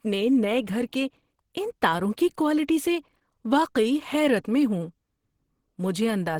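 Throughout, the speech was likely coded with Opus compression in its hybrid mode at a low rate fitting about 16 kbps, giving a plainly hoarse, grainy texture.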